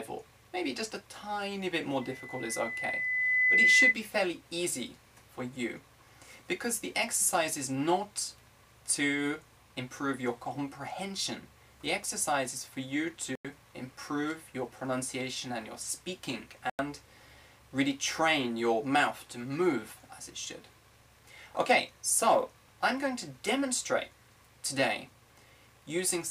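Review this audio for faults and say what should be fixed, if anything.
Loudspeaker feedback squeal runs from 2.01 s to 3.95 s: a pure tone at 2 kHz swells over roughly a second and a half until it sits around 10 dB above the program. The microphone is hearing its own loudspeaker, and at 2 kHz the loop gain has passed unity, so that frequency keeps amplifying itself. On a spectrogram it is a single bright horizontal line at 2 kHz thickening over time. Lower the monitor gain, move the microphone away from the loudspeaker, or notch 2 kHz.

Corrupt frames muted leave two holes of digital silence: 13.35 s to 13.55 s, lasting 0.2 s and spanning several compressed frames, and 16.70 s to 16.79 s, lasting 0.09 s and consistent with a single frame. Damaged bits made the decoder reject those frames, and the player substituted silence while keeping timing intact. On the waveform each hole is a flat line with sharp, squared edges. 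On a spectrogram each is a clean black vertical gap across all frequencies. Use error-protected transport or a decoder with packet-loss concealment.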